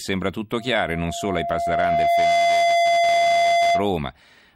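Loudspeaker feedback squeal from 0.56 to 3.94 s: a 686 Hz tone swells to roughly 10 dB above the speech as the microphone re-amplifies its own loudspeaker.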